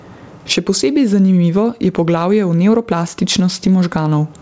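Speech that went through a wideband call with nothing above 8 kHz, and all the way through there's gain pumping: the level ducks around 20 dB under loud sounds, likely from gain set too high feeding a fast limiter.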